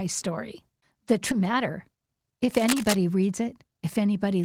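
Skip ahead at 1.31 to 1.42 s: a stretch of roughly 0.7 s was dropped, and playback jumps forward, joining both sides with no gap filled.

Jitter buffer speed-up at 1.88 to 2.36 s: the receiver trimmed an overfull buffer by cutting short pitch-period pieces, removing roughly 70 ms, so speech runs at 112% speed with unchanged pitch and sounds hurried.

Cable scratch noise at 2.55 to 2.95 s: dense, uneven bursts of scratching sit over the speech at about 5 dB below it, likely from a moved worn cable or connector whose contact resistance fluctuated.

A second jitter buffer speed-up at 3.32 to 3.72 s runs at 113%, again removing roughly 70 ms.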